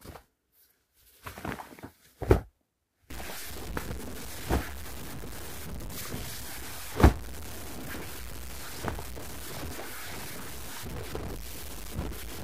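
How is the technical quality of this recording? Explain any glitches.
The recording is clean for the first three seconds, then degrades with a stuck bit from 3.10 s to the end. A data bit is likely held fixed, offsetting values by a step near -35 dBFS. This makes harsh, buzzy distortion and audible noise in pauses, visible as broadband haze on a spectrogram and a jagged waveform.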